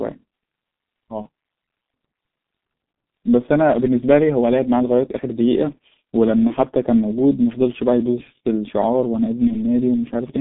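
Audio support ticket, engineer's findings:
Muffled, hoarse speech throughout; nothing above about 3.6 kHz, thin below 150 Hz, consonants smeared. Probable component: G.723.1 codec. Coarse 30 ms frames and a sluggish voice model; heavy damage fits its low rate of about 6.3 kbit/s.

Brief stretched smear, then weak, fading speech at 1.22–1.26 s, 6.47–6.53 s and 9.47–9.56 s. Component: VoIP packet loss concealed by the speech codec. Decoder extrapolates last pitch and filter with falling gain. Each gap fits one lost 30 ms frame, with slow recovery after.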